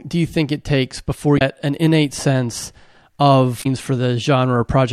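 Damaged data in a compressed stream hits this speech twice, from 1.35 to 1.41 s and from 3.59 to 3.66 s. The decoder misreads the corrupted frames and loses sync until it finds the next frame header, so each spot comes out as a brief chirp or squawk.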